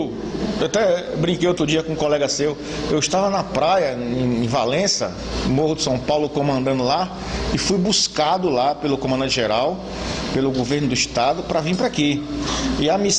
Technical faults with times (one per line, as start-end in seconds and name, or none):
none